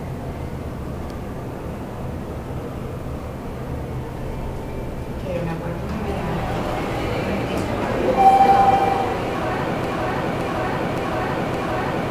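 A broken-record loop takes over at 9.84 s and runs to the end of the clip: a 0.57 s fragment of the audio repeats exactly, back to back, four times with no variation between passes. The likely cause is a player, encoder or stream that stalled and kept re-sending the last buffered piece it held, so whatever should have played after 9.84 s never arrives and is lost.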